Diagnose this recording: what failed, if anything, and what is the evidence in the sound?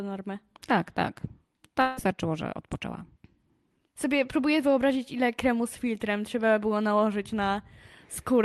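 The fault is at the network stage: a long network dropout from 1.81 to 1.99 s. For about 0.16 s the speech turns into a smeared, buzzy continuation of the preceding sound that fades instead of stopping dead. The speech then resumes with that stretch lost rather than delayed. This is the receiver concealing a likely burst of lost packets. A driver or buffer underrun would give a hard click or dead silence, but this gap is filled rather than empty.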